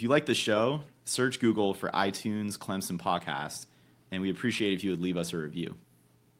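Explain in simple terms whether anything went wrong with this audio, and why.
From just after "you like the" at 0.32 s until 5.89 s, the speech drags slightly with small hiccups. These are repeated timing corrections, stretching it by roughly 150 ms. The cause is clock drift between sender and receiver: the sender's clock runs about 2% slow, so the receiver keeps repeating tiny pieces to stay in step.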